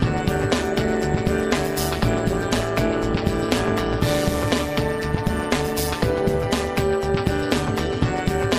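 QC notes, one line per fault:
throughout: overlap-add ripple. The level dips and swells by about 11 dB some 150 times a second, once per frame, because the overlapping windows don't sum to a constant gain. Unlike added hum or buzz, the sound itself pulses, giving a metallic buzz with extra tones around each note.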